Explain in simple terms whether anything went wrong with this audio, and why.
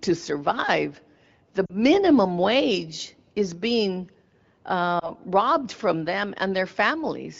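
Two short glitches come from lost AMR speech frames. At 1.66 to 1.76 s, right after "to survive the", about 40 ms of audio went missing. At 5.00 to 5.11 s, just before "robbed from them", about 20 ms was lost. Radio errors corrupted these frames, so the AMR wideband decoder filled the gaps by repeating the last good sound at falling strength. The first gap drops to near silence, the second becomes a brief dip or warble, and the speech comes back weak or rough for a moment.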